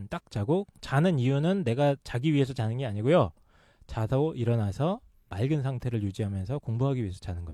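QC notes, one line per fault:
No faults found.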